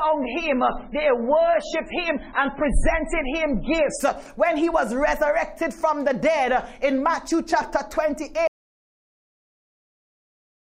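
The opening four seconds are dull and smeared, with the treble cut off and nothing above about 10.2 kHz, plus swirly codec artefacts. At 4.0 s the sound snaps to full clarity with no gap. That is an adaptive stream starting at a low bitrate, which fits a player beginning on a very low-bitrate MP3 rendition of around 16 kbit/s and stepping up to around 128 kbit/s once it had gauged the connection. A clip encoded at low quality throughout would never improve, and a failing connection would degrade mid-stream rather than recover early. From 8.48 s to the end the audio drops out to silence: it stops abruptly and never returns, and the gap is silent with no room tone or noise floor. That absence of any residual hiss separates it from a quiet passage or a fade, and the likely cause is a lost input, such as a disconnected device or a failed link, while the encoder kept writing silence.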